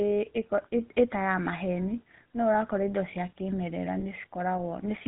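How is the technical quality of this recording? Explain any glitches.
The technical quality is limited. The whole recording has passed through a low-rate mobile phone codec, and one brief dropout occurs near the end.

The GSM full-rate codec is present from start to finish. This early mobile coder does not send the waveform itself. It sends a model of the vocal tract and drives it with a coarse pulse train, keeping only every third excitation sample, at a rate that fits the 13 kbps full-rate mode. Nothing above 4 kHz survives. The speech therefore sounds dull and band-limited, and the codec damage is plainly audible as a buzzy, gravelly roughness on the voice.

Lost GSM frames occur between 4.0 and 4.04 s, a gap that fits a single missing 20 ms frame. The decoder had no valid data for that moment, so it repeated the parameters of the last good frame. Instead of a clean gap, the speech briefly holds on a rough, metallic ring before normal decoding resumes. 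Because the loss is so short, the ring never decays into silence.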